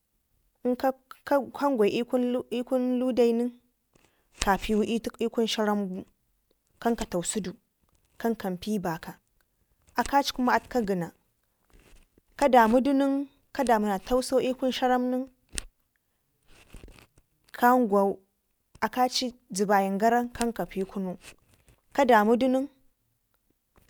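Nothing in this speech recording stands out as a technical fault, so there's nothing here to flag.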